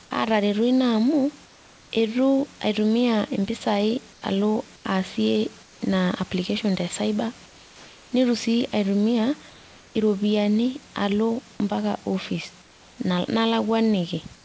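From 1.46 to 1.91 s, before "eitu aitumia", and at 4.13, 4.76, 5.63, 7.46 (after "te cyber"), 9.50, 12.62 and 14.36 s, the room background turns into a flat, featureless hiss about 2 to 4 dB quieter. This is likely comfort noise in place of the background during paused transmission.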